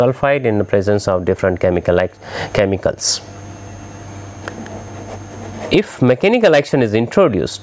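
Gain pumping runs throughout the clip: the level keeps dipping under each loud sound and swelling back in the gaps, by around 25 dB, squashing loud and soft parts together. The likely cause is input gain set far too high, with a fast limiter or compressor pulling it down on every loud sound. The call microphone processing leaves nothing above 8 kHz, which is expected.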